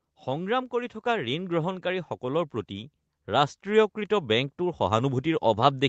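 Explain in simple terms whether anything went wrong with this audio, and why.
Automatic gain rising runs from about 0.25 s to the end of the clip at 5.9 s. The call's automatic volume control decided the microphone signal was too quiet, so it kept turning the level up, slowly rather than all at once. Because it boosts everything it hears, the speech and the background noise behind it grow louder together, giving a steady swell instead of an even level. The call line itself keeps nothing above 8 kHz, so the sound is less crisp.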